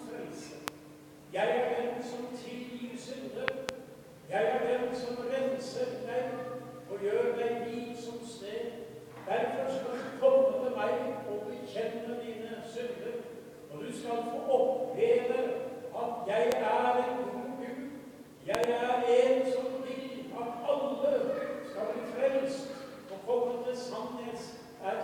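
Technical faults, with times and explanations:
0.68–0.70 s, 3.48–3.71 s, 16.52–16.54 s and 18.55–18.66 s: loud pop. Each event is a sharp transient roughly 25 dB above the programme level, single at 0.68 s and 16.52 s and a close double at 3.48 s and 18.55 s. The sound continues underneath. A voltage step or pulse, likely from a plug, switch, static discharge or driver glitch, has been added to the signal and shaped by the following circuitry.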